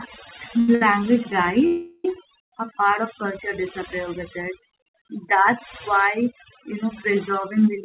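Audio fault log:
throughout: overdone noise removal. An overly aggressive noise reducer keeps cutting bands near its noise estimate, so the background drops and breaks up into twinkling specks.
0.60–0.69 s and 0.75–0.82 s: short stall from a late packet, twice. The jitter buffer ran dry each time, and the receiver stretched the last sound for about 81 ms, then 60 ms, leaving held sound with a slight buzz or dip and nothing lost.
1.67–2.05 s: call audio freeze. The jitter buffer likely emptied while packets were delayed. About 373 ms of the last sound is drawn out as a fading buzz or hiss before the audio resumes where it stopped.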